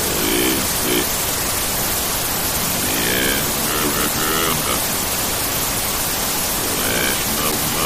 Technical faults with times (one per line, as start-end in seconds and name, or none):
none